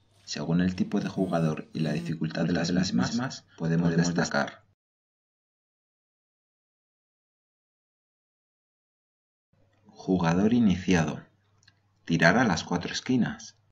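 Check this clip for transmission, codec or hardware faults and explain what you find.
One fault is present: a doubled audio track from 2.40 to 4.30 s. A full-band copy trails about 200 ms behind at roughly the original level, likely from a slower second capture path or an edit holding two out-of-step copies. It sounds like a clean echo with no room tail. On a spectrogram every event repeats a fifth of a second later, and the duplicate begins and ends abruptly.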